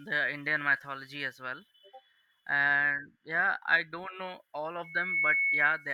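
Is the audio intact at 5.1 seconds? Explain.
No. At 5.1 s the speech is inside a loudspeaker feedback squeal running from 4.84 to 5.92 s, just after "I don't know all". The microphone is re-amplifying its own loudspeaker, and the loop's gain passes one at 2.2 kHz. That single tone swells over roughly a third of a second to about 5 dB above the speech. The gradual build at one pitch distinguishes it from a steady interference whine.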